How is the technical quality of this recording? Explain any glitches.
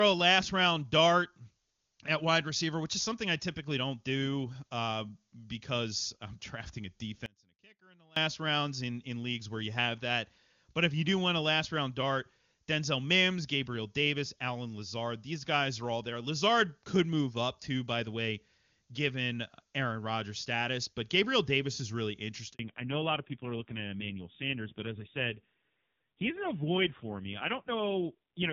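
The recording has three clear faults: a dropout near the start, then a short handover gap that leads straight into a drop to narrowband quality for the rest of the clip. Before that change, the speech has the full, clear top end of wideband HD Voice, which fits AMR-WB at a high rate such as 23.85 kbit/s.

Audio dropout to a faint residue, 7.26 to 8.16 s: The wanted signal stops reaching the output for about 0.9 s, right after "drafting a", and returns at "rounds in in leagues". The likely cause is a break upstream while the rest of the path stayed live. The gap is not clean silence. A faint residue of sound remains, about 30 dB below normal level. Both the cut and the return are abrupt, nothing like a natural pause or fade.

Handover gap, 22.53 s: After "is really", the call is moved from one network link to another, and no speech frames arrive during the switch. The sound dies away almost at once and stays silent for about 60 ms until the new link starts carrying audio. 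Whatever was said in that slice is simply missing, and the join can be heard as a brief hole.

Fallback to narrowband, 22.59 s to the end: When the new link comes up, the call no longer runs on the wideband codec. The sound points to an older narrowband codec at a very low rate, around AMR-NB 5.9 kbit/s. Nothing above 4 kHz survives, so sibilants lose their sharpness and the airy top of the voice disappears. The switch also makes the speech duller, rougher and more boxed-in than before.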